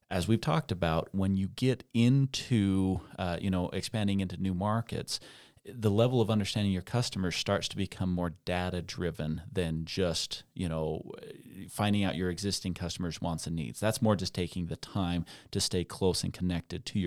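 No technical faults are audible anywhere in this recording.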